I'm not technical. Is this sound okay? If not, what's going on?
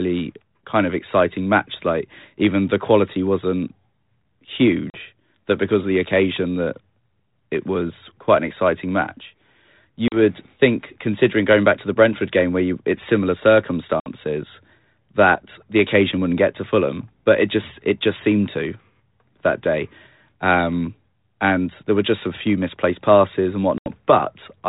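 No. There is packet loss on an ADPCM call at 4.9, 10.08, 14.0 and 23.78 seconds. Each time, a few packets of the call never arrive. A short silent gap of 40 to 80 milliseconds cuts in sharply. The phone's decoder then briefly loses track, so the speech returns slightly distorted before settling.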